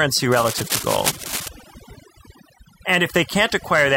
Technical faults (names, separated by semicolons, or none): overdone noise removal; cable scratch noise